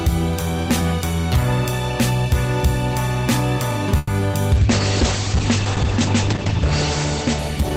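At 3.97 s the sound stops moving forward. The last moment is stretched into a fading buzz or hiss until 4.10 s. This is a call audio freeze. The likely cause is packets held up in transit, so the jitter buffer ran dry. The receiver covered about 110 ms by extending what it already had. When the packets arrived, playback resumed exactly where it left off. Nothing is lost. Everything after this point simply plays about 110 ms later than before.

Two short concealed packet losses follow at 4.20 to 4.23 s and 4.31 to 4.35 s. In each, about 20 ms of audio never reached the decoder in time. The receiver patched each hole by continuing the preceding sound, then blended back into the real signal. Each sounds like a brief smear or wobble. Part of the original sound is gone in both places, not just delayed.

From 4.57 s to the end there is a call bitrate drop. The encoder was pushed from 32 kbps down to 9 kbps and stays at that low rate for about 2.4 s. 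The coarser coding makes the sound rough and watery. The audio band also shrinks from 20 kHz to 8 kHz. The top end disappears and the sound turns dull and muffled. It does not recover before the clip ends.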